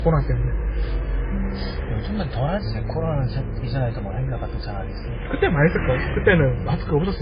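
From start to finish the sound carries a mix of coding artefacts, with nothing above 5 kHz, so it's dull and smeared, with a swirly, warbling edge on top. That points to transcoding between lossy codecs, likely a very low-rate MP3 re-encoded as AAC, which locked in the first codec's cut-off and damage and layered more on top.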